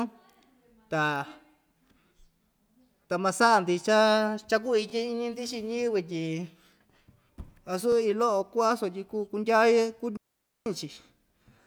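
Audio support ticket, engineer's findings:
Overlapping chunks: short stutter, 23 ms replayed at 1.88–1.90, 4.90–4.92, 7.92–7.95 and 10.95–10.97 s. Joins every 3.0 s, so the chunking stage starts each block before the previous ends. Regular spacing and doubled audio rule out random packet loss.

Digital wireless dropout: clean near-silent hole 10.17–10.66 s (about 491 ms), right after "sutyi kuu kundyaye". Receiver muting on data loss with a brief fade. No noise burst either side, unlike analog RF dropout, and off the 3 s chunk grid.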